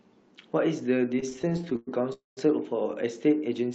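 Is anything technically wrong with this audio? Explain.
Yes, there are two faults. Repeated stalls (stutter) from 1.19 to 1.89 s: packets arrived late, so the jitter buffer kept running dry, causing sixteen brief holds, the longest 0.11 s, where the speech drags and stutters. A call audio freeze from 2.13 to 2.39 s, likely from packets held up in transit, stretches the last sound into a fading buzz or hiss that drops to silence for about 0.14 s before the speech resumes where it stopped.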